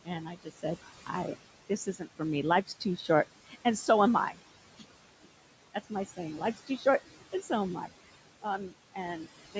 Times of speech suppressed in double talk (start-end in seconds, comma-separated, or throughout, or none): none